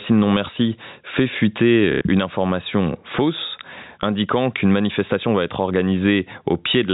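From the start and throughout, the level pumps: it ducks by about 10 dB under louder syllables, leaving the speech squashed. This is gain pumping, likely from input gain set far too high with a fast limiter pulling it back.

At 1.92 s, between "fait fuiter" and "une information fausse indiquant", packet loss with the last packet repeated fills a 90 ms gap until 2.01 s. The repeated segment gives a brief robotic stutter, which points to three lost 30 ms packets. The band-limited G.711 telephone character stays audible throughout.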